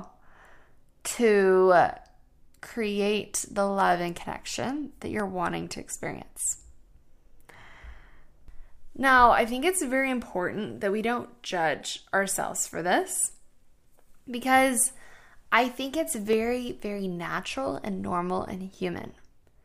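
At 3.80 s, between "create the" and "and connection that", a single sharp click cuts through the speech. More clicks follow at 5.20 s, after "and connection that", and at 16.33 s, after "I think it's". These are dropped samples: the waveform jumps straight to a later value, likely because a fraction of a millisecond of samples went missing. Unlike a dropout, no sound audibly disappears. Each event is a lone, instantaneous tick.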